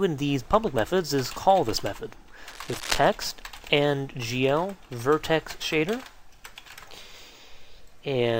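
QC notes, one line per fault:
2.48–3.09 s, cable scratch noise: a dense, uneven burst of scratching and rustling sits over the sound for about 0.6 s, roughly 10 dB below the signal. The irregular, crackly texture comes from contact resistance fluctuating quickly, which modulates the signal path with ragged noise. This is likely a worn cable, connector or control being moved during the take; reseat or replace the suspect part and recapture.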